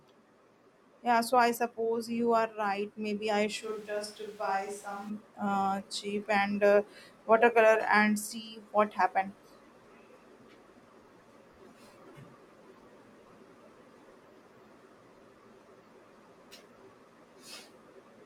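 From 3.64 to 5.08 s the speech turns suddenly hollow and thin, about 10 dB quieter and noisier, likely a switch to a distant microphone.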